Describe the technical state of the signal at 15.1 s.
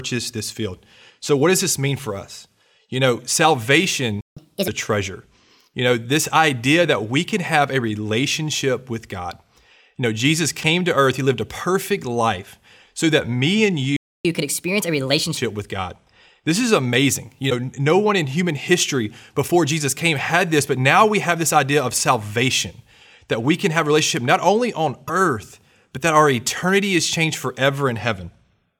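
At 15.1 s the speech is in a catch-up at higher speed, running from 14.25 to 15.37 s, just after "so that me and". The player resamples its backlog after a stall. It plays at 1.25 times speed, pitch raised about four semitones.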